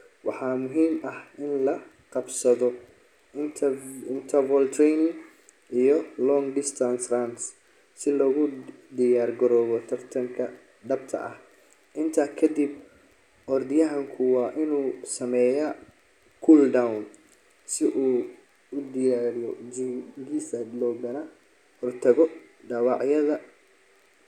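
No technical faults are audible anywhere in the speech recording.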